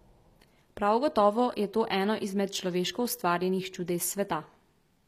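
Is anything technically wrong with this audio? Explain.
Yes. Throughout the speech, s sounds come out gritty and lispy over a metallic treble, likely from HE-AAC compression at a bitrate near 24 kbps. Only the lower band is coded and the top is copied up from it, so a spectrogram shows blurred, misaligned harmonics repeated above a sharp crossover.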